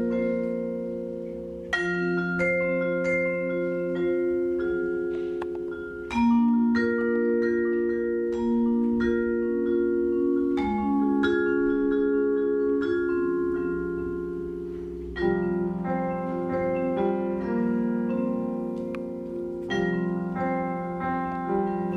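Nothing here calls for comment, as the audio carries on from its first moment to its last without anything going wrong along the way.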